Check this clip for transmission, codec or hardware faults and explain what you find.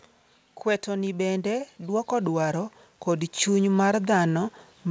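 One fault stands out: an automatic gain rising from 0.84 s through to the end of the clip. The level control judged the input too quiet and kept raising its gain, so the speech and the background swell together in a slow, steady climb rather than a sudden jump. The call path leaves nothing above 8 kHz, which fits the G.722 wideband codec.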